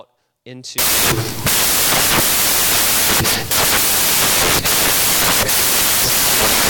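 From 0.78 s to the end, the speech collapses into loud, harsh broadband noise: samples built from the wrong bytes. Each sample's bytes are assembled misaligned or swapped, so the rapidly varying low-order bits land in the high-order position.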